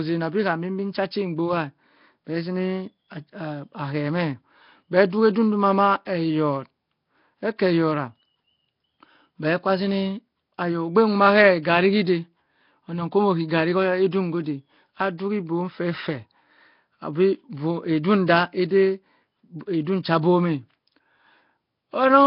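Nellymoser compression runs through the whole recording, from start to finish. The sound likely passed through the Nellymoser Asao codec, which fits a rate of about 22 kbps. It codes short blocks with very few bits, so the weaker frequency bands receive nothing and are refilled with noise. The damage is heavy: the speech carries a rough, hissy halo and a smeared, underwater blur, and nothing survives above 5.3 kHz.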